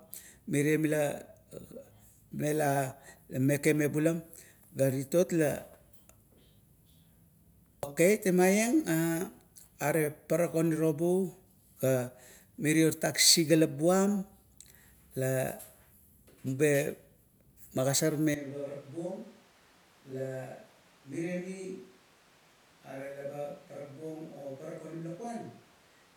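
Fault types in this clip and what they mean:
Switch to a distant microphone: From 18.34 s to the end, the speech turns suddenly roomy and hollow, loses bass, and drops roughly 10 dB in level, with background room noise sitting only around 25 dB below the speech. The abrupt change in tone and level, with no return, likely comes from the close microphone failing or being dropped, leaving the recording to a microphone placed much farther from the talker.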